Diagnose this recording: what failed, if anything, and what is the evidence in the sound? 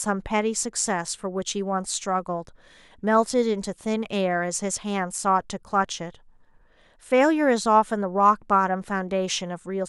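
Nothing failed here; every stage from capture to playback holds up, and there's nothing in the sound that points to a problem anywhere along the chain of this speech recording.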